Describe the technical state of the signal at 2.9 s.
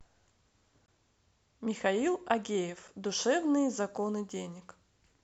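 A hard-edged silent hole of about 6 ms cuts the speech at 2.88 s: a gap between stream segments, where mismatched time stamps leave space the player fills with silence.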